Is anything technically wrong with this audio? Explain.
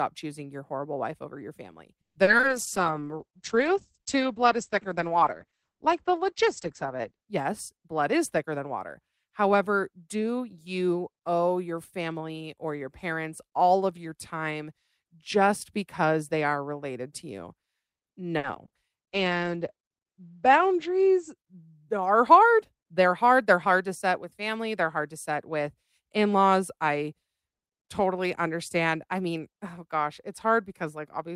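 Yes. The speech has three kinds of network-call faults, each occurring more than once.

Repeated packet loss (robotic sound) occurs at 2.01–2.45 s and 18.38–18.74 s. In the first stretch, four gaps (the longest 140 ms) are patched by extending the preceding sound, so half the span is synthetic. The second has five shorter gaps, the longest 60 ms, with about a third concealed. Both stretches sound choppy, with short pieces dropping out.

A call bitrate drop runs from 2.49 to 7.33 s and again from 19.13 to 21.43 s. The top end is cut from 20 kHz to 8 kHz and the coding turns coarse, consistent with the encoder falling from about 32 kbps to around 10–12 kbps after a lower bandwidth estimate. The low point lasts nearly 4.8 s the first time and about 2 s the second. Throughout, the speech sounds muffled and somewhat watery.

A jitter buffer speed-up occurs at 7.51–8.67 s (105% speed), 12.01–12.65 s (111%), and 22.86–23.66 s (107%). 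After audio builds up in the receive buffer, the receiver trims it back by cutting out short pitch-period segments. Roughly 70 ms is removed in each of the first two stretches and about 50 ms in the third. Pitch stays unchanged, but delivery sounds hurried and rhythm tightens.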